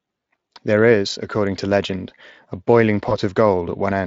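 At 3.09–3.17 s, VoIP packet loss concealed by the speech codec: one lost 20 ms frame is extrapolated into a buzzy tone or coloured noise that fades, showing as a sagging envelope.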